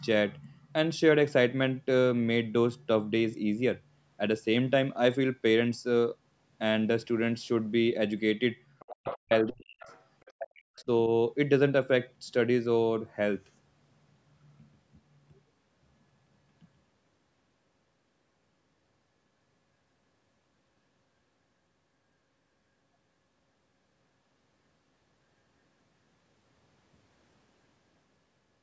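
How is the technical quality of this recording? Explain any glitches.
The speech has a cluster of echo-control faults between 8.8 and 10.9 s, where the far end's audio and the near talker overlap.

Other side's voice leaking through: scraps of a second voice appear at 8.79–8.89, 9.09–9.17, 9.80–10.03, 10.21–10.32 and 10.76–10.84 s, mostly about 25 to 35 dB below the speech, but about 10 dB below at 9.09 s. The likely cause is loudspeaker playback reaching the microphone and slipping past the echo canceller.

Speech suppressed in double talk: from 8.89 to 9.87 s and 10.33 to 10.89 s the talker's level dips sharply, by as much as about 40 dB, in pieces totalling roughly 0.7 s and 0.5 s. This is likely the canceller attenuating everything while both sides spoke. The call chain's band limit, with nothing above 8 kHz, is normal.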